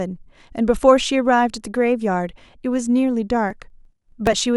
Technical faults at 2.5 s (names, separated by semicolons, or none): none